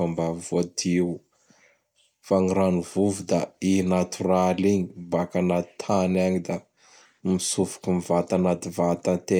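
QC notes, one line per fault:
No faults found in this speech clip.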